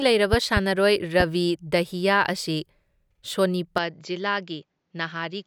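Two bursts of loud pops come early. From 0.33 to 0.60 s a pair of sharp clicks lands, peaking about 10 dB above the speech. A single stronger pop follows at 1.20 to 1.23 s, about 15 dB up. Each is likely a brief voltage pulse from a plug, switch or static. The speech carries on beneath them.

At 3.78 s the input is likely switched to a poorer device. The change is instant, with no gap. Nothing above 7.6 kHz survives, so the speech turns dull. The level drops about 5 dB. A fresh noise floor sits about 50 dB below. This lasts to the end.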